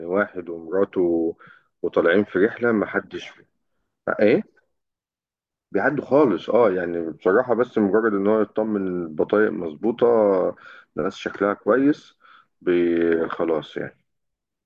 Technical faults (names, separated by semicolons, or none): none